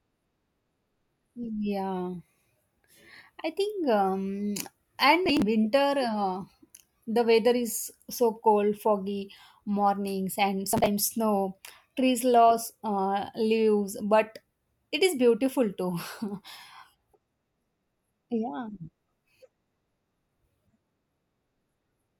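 Speech clip with processor overload crackle twice, at 5.26–5.42 s just before "winter uh" and 10.72–10.88 s after "foggy mornings and": roughly twenty buffers of about 10 ms each get skipped, giving gritty tearing.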